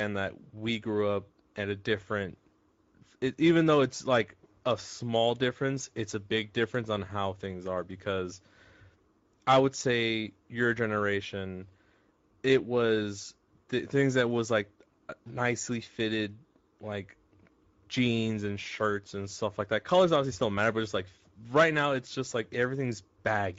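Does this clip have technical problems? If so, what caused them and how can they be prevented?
Yes. Speex codec damage runs throughout the speech. The CELP coder has too few bits for the excitation, so voicing turns hoarse and noisy. The sound points to a mid-quality setting near 17 kbps. Unlike the swirly, metallic smearing of transform codecs, this is a rough buzz within the voice itself. To prevent it, record or send with a higher Speex quality or a modern codec such as Opus.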